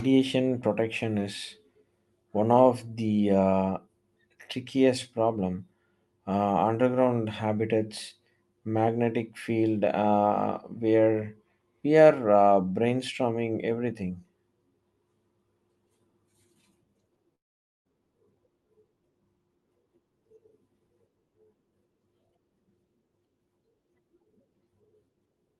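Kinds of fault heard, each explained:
Long network dropout: At 17.35 s the speech breaks off. The last sound is stretched into a buzz or hiss that fades to near silence. Speech returns at 17.87 s with about half a second simply gone. The likely cause is that no audio reached the receiver, and its concealment carried the final sound forward until nothing was left. The returning audio has the same band-limited codec character, with nothing above 12 kHz.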